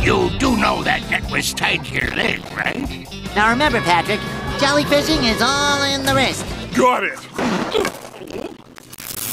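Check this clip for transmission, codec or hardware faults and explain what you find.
Processor overload crackle appears twice, from 1.86 to 2.84 s and from 7.70 to 9.21 s. The processor misses many buffer deadlines in a row. Each miss drops in a short silent gap, which points to buffers of about 5 ms. Dozens of hard-edged gaps merge into a gritty, tearing crackle.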